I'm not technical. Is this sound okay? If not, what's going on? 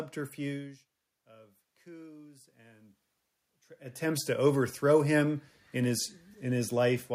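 No. The level creeps up on its own twice, from 1.28 to 3.02 s and from 3.78 to 5.26 s, just before "in his". This is automatic gain rising: when the talker drops away from the microphone, the system slowly turns itself up, so voice and room noise swell together.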